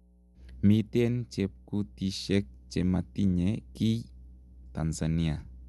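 A steady mains hum at 60 Hz runs under the speech throughout, roughly 30 dB down, from a ground loop or nearby transformer coupling power-line current into the signal.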